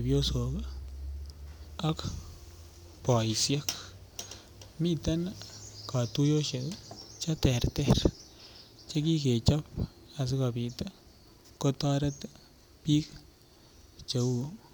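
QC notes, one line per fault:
No technical fault is audible anywhere in the recording, with level, bandwidth and continuity holding steady for its whole duration.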